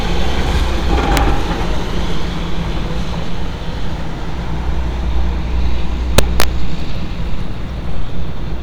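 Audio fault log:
1.17 s: integer overflow, a single sharp crack where a peak about 1 dB past full scale wrapped to the opposite sign instead of being limited.
6.18 to 6.44 s: integer overflow, loud passage driven about 2 dB over the limit, each peak flipping across the full range, giving repeated violent cracks harsher than clipping.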